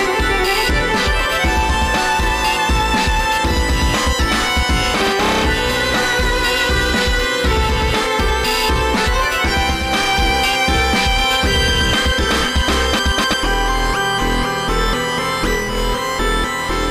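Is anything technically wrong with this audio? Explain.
Yes. From 9.70 to 15.79 s, digital radio blending to analogue: losing digital reception, the receiver cross-fades over 0.25 s to the FM broadcast. Hiss appears about 45 dB down, a faint broadband floor on the spectrogram, with the waveform level unchanged.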